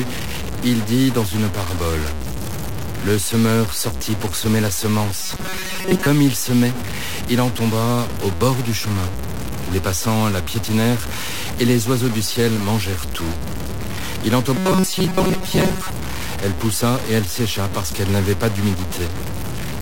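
Low bit depth without dither runs through the whole speech clip: the coarse steps, likely about 4 bits with plain truncation, leave a gritty, signal-following distortion only around ten dB below the voice. Robotic sound from repeated short buffers appears at 5.22–6.07 s, between "sortit pour semer la" and "il semait il en", and again at 14.57–15.90 s. Most of the audio there is skipped while a chunk of roughly 5.3 ms is likely looped, which forces a rigid metallic buzz at 188 Hz.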